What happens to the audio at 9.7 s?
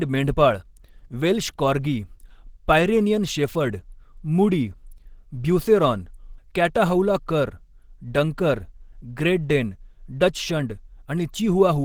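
At 9.7 s the speech carries the same coding damage heard across the whole clip, likely Opus compression. The encoder seems to be running its hybrid speech mode at a low rate, around 16 kbps. Voices turn muffled and hoarse, and grainy texture is plainly audible.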